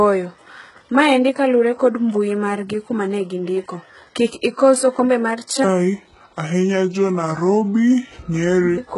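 A speech recording with two problems. Throughout, the treble sounds synthetic: there's nothing above 11.1 kHz, and the top end has that gritty, metallic sheen where s sounds go lispy. That's most likely HE-AAC compression at a very low rate, which fits something around 12 kbps. The codec keeps the lower spectrum and fakes the highs by copying lower bands upward, so the harmonics up there don't line up with the real ones. The damage is heavy. Then, right after "kik ikos okombe mar", from 5.64 s to 8.78 s, there's a section at the wrong speed. It runs at 0.726 times normal, so the voice drops roughly five semitones and drags noticeably, with pitch and tempo sinking together. That points to the segment being played or edited against the wrong clock.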